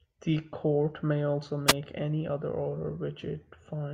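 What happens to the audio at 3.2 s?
Nothing goes wrong at 3.2 s: the speech carries on intact there, with no dropout, click or distortion.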